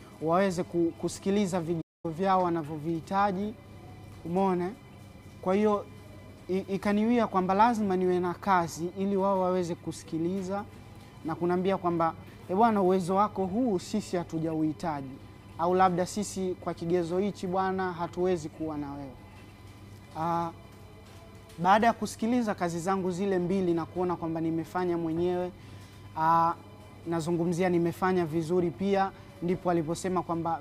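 At 1.81 s the sound drops out mid-flow until 2.05 s, a playback stall of about 0.23 s, likely from the player running out of data or being blocked.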